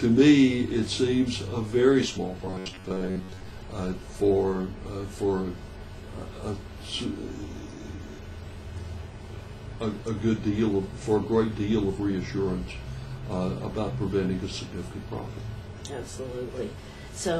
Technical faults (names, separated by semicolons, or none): robotic sound from repeated short buffers